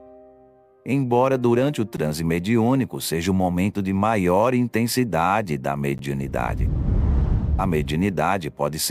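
At 1.97 s and again at 5.98 s the sound stops dead for 12 ms and then carries on exactly where it left off: a gap between chunks. The audio was delivered in 4 s pieces, and silence was inserted at each join, likely from codec padding or a late-starting player. That regular 4 s spacing and the fact that nothing is missing, only pushed later, separate it from a dropout, where sound is actually lost.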